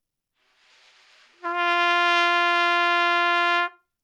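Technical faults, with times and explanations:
No technical faults can be heard in this audio, so there are no times or explanations to give.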